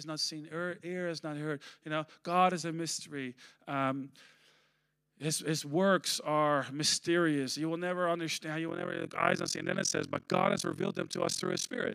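From 8.68 s to the end at 11.94 s, the speech takes on an overlap-add ripple. It was split into windowed frames and reassembled with an overlap whose windows do not sum to a steady gain, so the level swings by about 60 dB once per frame, at around 40 Hz. The result is a harsh, robotic flutter. Packet-loss dropouts leave irregular gaps, but these dips are strictly periodic and never stop.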